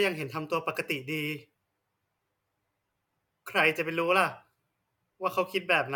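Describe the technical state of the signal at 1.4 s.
A brief tick at 1.39 s marks a block of digital silence about 0.67 ms long, which fits a 32-sample block. The audio cuts out and returns with no fade, and the gap is too short to hear as a hole.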